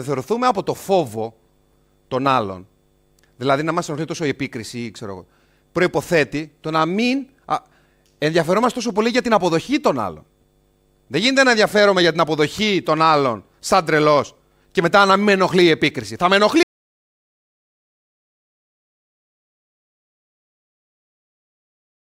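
At 16.63 s the speech stops abruptly in mid-flow and never returns. Everything from there to the end is dead digital silence, with no room tone, hiss or decay left behind, so whatever was being said is simply lost. This is an audio dropout to silence. The likely cause is that the input signal was cut off, through a disconnected device, a failed link or an accidental mute, while the recorder kept writing silence to the file.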